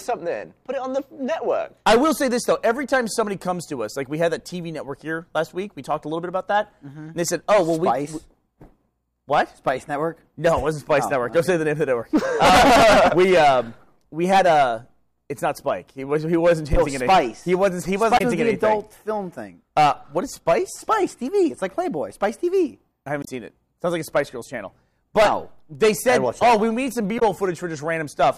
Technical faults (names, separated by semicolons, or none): damaged data in a compressed stream